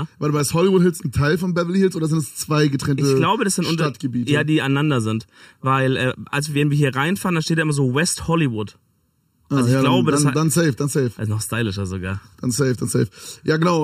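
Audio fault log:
Throughout, channel delay (comb filtering): one channel runs a fraction of a millisecond, roughly 0.7 ms, behind the other before the two are folded to mono. Content shared by both channels cancels wherever the delay equals half a cycle, so a fixed notch sits near 700 Hz, with further notches repeating about every 1.4 kHz above it. The sound comes across hollow and phasey, with a thinned quality that stays put rather than sweeping.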